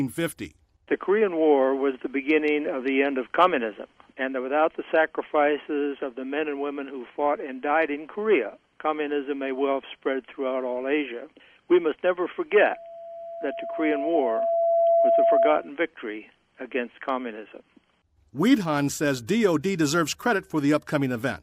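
At 12.52 s a loudspeaker feedback squeal begins: a single tone near 672 Hz swells out of the sound over roughly two seconds, then sits a few decibels above everything else until it stops at 15.71 s. A microphone was hearing the loudspeaker it fed, and at that frequency the loop gained more than it lost, so the tone fed itself. Unlike a steady interfering tone or hum, it starts from nothing and grows on its own.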